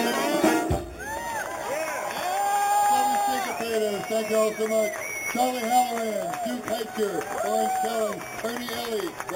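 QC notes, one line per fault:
Throughout, imaging from sample-and-hold upsampling: audio at an 8 kHz rate was raised to 44.1 kHz by repeating samples without a smoothing filter, mirroring the band into a first image from 4 kHz to 8 kHz, about 14 dB below the signal, heard as a metallic fizz tracking the sound's level.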